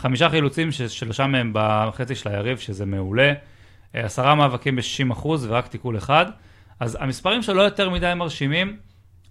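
Nothing goes wrong anywhere in this recording of speech; there's no glitch or disturbance at any point to flag.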